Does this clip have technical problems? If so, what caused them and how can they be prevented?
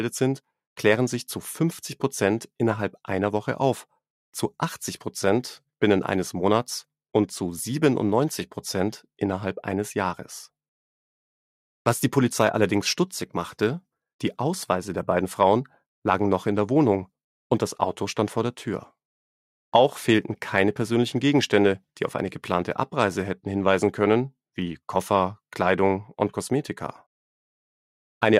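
No, nothing in this clip stood out as a technical problem on listening, so there is nothing here that needs preventing.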